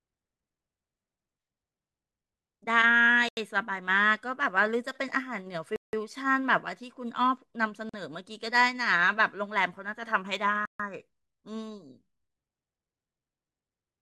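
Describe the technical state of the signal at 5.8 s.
At 5.8 s the speech drops into a block of digital silence. It runs from 5.76 s to 5.93 s, about 171 ms. For that stretch the signal is silent. The likeliest cause is the program failing to fill its output buffer in time. The gap size fits an 8192-sample block. The signal stops and restarts with no fade. That leaves a short, audible hole.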